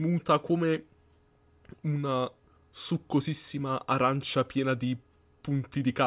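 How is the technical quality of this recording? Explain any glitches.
I hear no glitches or technical faults here.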